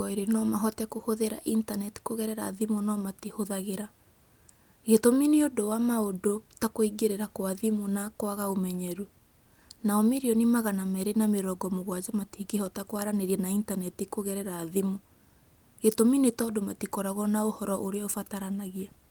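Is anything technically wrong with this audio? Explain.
No, nothing technically wrong can be heard anywhere in this speech recording.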